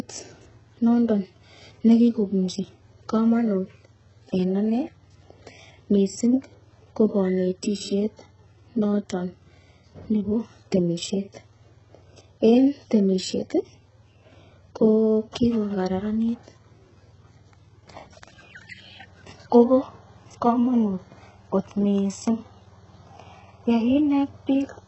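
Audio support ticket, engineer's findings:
HE-AAC compression, throughout. Heavy damage: treble above 8 kHz absent, upper band sounds synthetic, sibilants gritty and lispy. Likely cause is spectral band replication rebuilding highs from copied lower bands, consistent with roughly 8 kbps coding of this speech.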